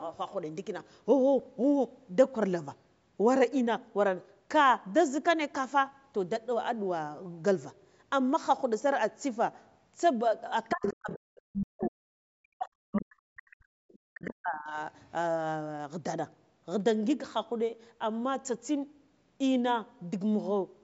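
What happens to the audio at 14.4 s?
The echo canceller likely failed to separate the talker from loudspeaker echo while both sides spoke, so it turned everything down: speech suppressed in double talk, from 14.12 to 14.78 s, dips by around 40 dB at its deepest. Just before, from 13.88 to 14.31 s, residual echo likely slipped past the canceller as the other side's voice leaking through, faint at roughly 20 dB below the speech.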